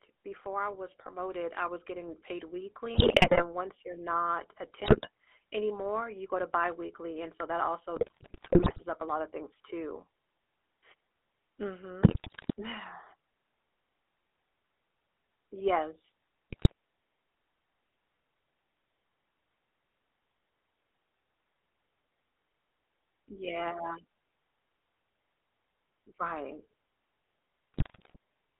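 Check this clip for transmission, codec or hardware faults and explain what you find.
Three faults are present: GSM full-rate coding throughout, a rise in automatic gain at the start, and repeated bursts of GSM bit errors.

GSM full-rate codec, throughout: The speech was coded by the original GSM full-rate scheme, which fits a 13 kbps stream. It reduces the voice to a vocal-tract filter fed by a sparse, regularly spaced pulse excitation. The line passes only about 300 Hz to 3.5 kHz, so the top and bottom of the voice are missing. The codec damage is plainly audible as a buzzy, gravelly roughness over all of the speech.

Automatic gain rising, 0.05 to 2.64 s: The automatic gain control judged the input too quiet and raised its gain slowly, by about 6 dB over roughly two and a half seconds. The voice and the background noise swell up together across the opening, instead of the speech starting at a steady level.

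GSM bit errors, at 2.94 to 3.44 s, 4.84 to 5.08 s, 7.96 to 8.83 s, 12.02 to 12.53 s, 16.50 to 16.72 s and 27.74 to 28.16 s: A weak radio link let corrupted bits reach the speech decoder. When the filter, pitch or gain parameters are wrong, the spectrum is bent or the level jumps frame by frame. Each burst breaks the voice into squawks, pops and gargling. Landmarks include the burst just before "once you're not a", the one between that phrase and "anymore you go to", and the one between "biweekly and so that" and "up a lotta things".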